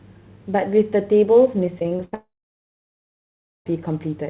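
From 1.66 to 2.14 s the speech breaks up with repeated packet loss, giving a robotic sound. Six separate holes open in under half a second, the longest 75 ms. Each is patched by stretching the preceding sound, so about a third of the span is concealment rather than real audio, and roughly 180 ms of material is lost. The result is choppy fragments with pieces clearly missing.

At 2.14 s the audio stops and does not return until 3.71 s, a gap that is likely a long network dropout. The last sound is carried on briefly as a fading buzz or hiss, then about 1.4 s of silence follows. When audio resumes, it picks up further on, with roughly 1.5 s of speech never played. Throughout, the band is capped at 4 kHz, which points to a narrowband telephone codec.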